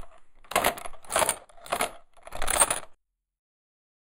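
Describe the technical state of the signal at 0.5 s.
At 0.5 s the sound is hollow, with a dip in the upper range around 5 kHz. This is channel delay (comb filtering), present throughout: one channel lags by roughly a tenth of a millisecond, a few samples, and summing to mono cancels fixed, evenly spaced frequencies.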